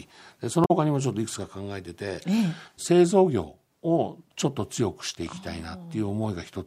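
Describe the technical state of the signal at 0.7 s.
Damaged data in the compressed stream runs from 0.64 to 0.71 s, about 70 ms. Corrupted bytes there leave the decoder misreading frames and losing sync until it finds the next valid frame header, so the speech breaks into a short chirp or squawk.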